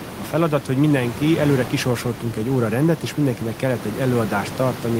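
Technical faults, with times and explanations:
No technical faults are heard in the speech.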